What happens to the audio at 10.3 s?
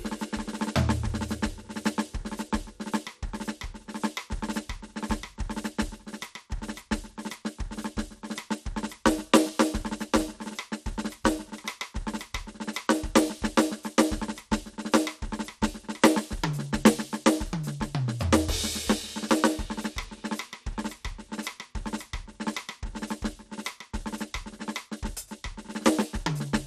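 At 10.3 s the music carries the MP2 compression damage that runs through the whole clip, not a local event. The sound is dull, with a gurgling, granular edge, likely from MPEG Layer II coding at a low rate, which fits roughly 80 kbps. Too few bits go to the 32 sub-bands, so upper bands drop out and flicker while the remaining ones are coarsely quantised. On a spectrogram nothing shows above 15 kHz, and the upper bands appear as patchy, blinking blocks.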